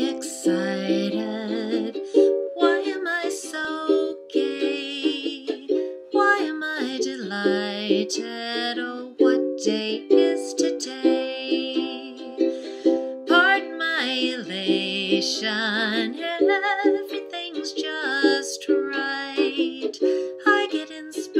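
No technical faults are audible anywhere in the audio.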